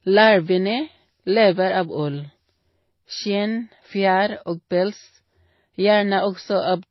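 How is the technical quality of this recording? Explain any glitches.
Quality's pretty rough. Throughout, the speech is dull and smeary, with nothing above 5.8 kHz and layered swirly, watery artefacts, likely from transcoding between lossy codecs, which fits low-bitrate MP3 re-encoded as HE-AAC.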